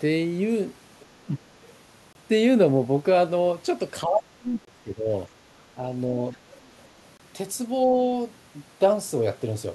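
From 1.02 to 1.43 s the speech sinks by roughly 15 dB. This is speech suppressed in double talk. The other party was likely talking at the same moment, and the echo canceller, unable to tell the local talker from its loudspeaker echo, pulled the whole signal down. Just after, from 1.62 to 1.72 s, a faint second voice slips in, about 35 dB under the main speech. That is the other side's voice leaking through, most likely loudspeaker playback the echo canceller failed to strip from the microphone.

At 2.13 s there is a sharp-edged hole of 23 ms, and the same hole returns at 4.65 s and 7.17 s, a steady 2.5 s apart. This is a gap between chunks. The audio was handled in 2.5 s blocks, and silence was left at each join, which points to padding or late playback of each block rather than lost sound.

The heaviest suppression runs from 4.05 to 5.10 s, where the speech drops by about 25 dB for roughly a second, with the 4.65 s gap falling inside it. 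Two brief dips of about 5 dB follow at 5.76 to 5.83 s and 6.34 to 6.38 s, each likely from the same double-talk clamping. Between 6.69 and 6.86 s the far-end voice bleeds through again at about 35 dB below the speech.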